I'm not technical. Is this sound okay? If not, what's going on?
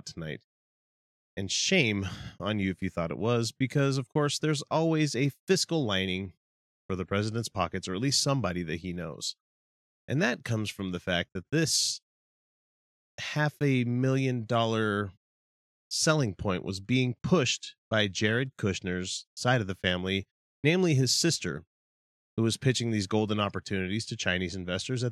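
Yes, this sound is okay, and there's nothing going on with it that needs fixing.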